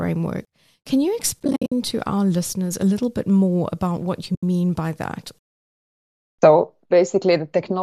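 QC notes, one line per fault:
1.40–1.72 s and 4.35–4.43 s, AAC frame loss with muting: soft-edged gaps, first several short holes (the longest around 70 ms) before "to our listeners a", then one 80 ms hole between "more about what you" and "by that". The decoder zeroed the lost frames, and the overlapping windows faded each edge, beneath a light graininess that is likely low-delay AAC coding.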